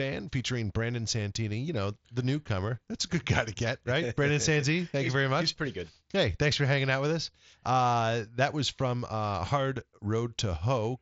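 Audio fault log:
No faults found; the speech arrives over a Bluetooth mSBC headset link, its band stopping near 7.7 kHz as that wideband codec dictates.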